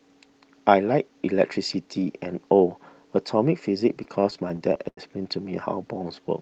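From 4.03 to 4.99 s the speech hits repeated stalls (stutter): packets arrived late, the jitter buffer ran dry ten times, and each gap was bridged by extending the last sound, about 195 ms in all, the longest 86 ms. Nothing is lost, but delivery drags and hiccups. On a spectrogram, short stretches of smeared, repeated harmonics appear, with faded tails in the longer gaps.

From 5.92 to 6.28 s comes a jitter buffer slow-down: to rebuild its reserve, the receiver repeated single pitch periods, adding 59 ms and running at 86% speed. The pitch stays put while sounds stretch out. The waveform shows near-identical repeated cycles and a spectrogram shows elongated, unchanging formants.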